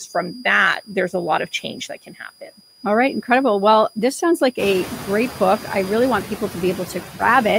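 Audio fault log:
throughout: switching supply whistle, a thin tone near 4.84 to 4.91 kHz at about 15 dB under the speech, from a switching power supply running in an audible mode.
throughout: noise suppressor artifacts, the suppressor pulls down bands it judges to be steady noise frame by frame.
0.07–3.28 s, 4.52–5.64 s, 6.25 s to end: speech cut by the noise suppressor, parts of the speech mistaken for noise and turned down by up to about 17 dB, about 15 dB and about 14 dB respectively. In the first span roughly a second of speech in total sounds swallowed. The second span falls between "this sounds" and "I really want" and loses a few tenths of a second. The third follows "I really want". Room noise rises by about 19 dB near 4.5 s and sits about 13 dB under the speech.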